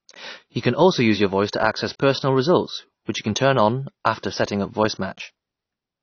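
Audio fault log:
throughout, AAC compression: the speech was likely encoded with AAC-LC at a low rate, which fits about 24 kbps. The encoder lowers its cut-off and quantises bands coarsely, so the sound turns plainly dull and smeared, with fizzy, warbling sibilants.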